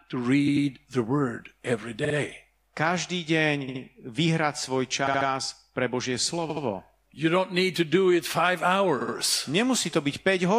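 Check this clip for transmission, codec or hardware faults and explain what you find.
The speech has a stutter from repeated frames, six times: 0.47, 2.04, 3.67, 5.06, 6.49 and 9.00 s, the last just after "it five". Each time a short run of compressed audio gets decoded again, so a snippet of roughly 40 to 90 ms, mostly about 70 ms, plays twice more (three extra times at 5.06 s). You hear a quick machine-gun stutter, and the clip runs longer by 100 to 210 ms at each spot.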